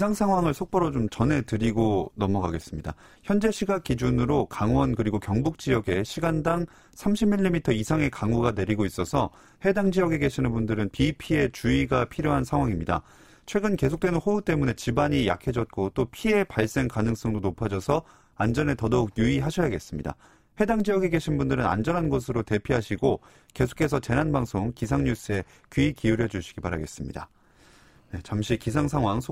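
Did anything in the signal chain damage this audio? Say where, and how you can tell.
Yes. Overlap-add ripple runs through the whole speech clip, from frame-based processing whose resynthesis windows don't sum evenly. The level pulses about 11 dB at around 200 Hz, a metallic buzz with extra tones around each note; the waveform envelope shows regular scalloping, the spectrogram vertical striping.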